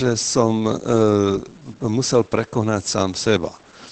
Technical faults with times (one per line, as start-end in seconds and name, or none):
0.00-3.91 low bit depth without dither
0.00-3.91 Opus voice compression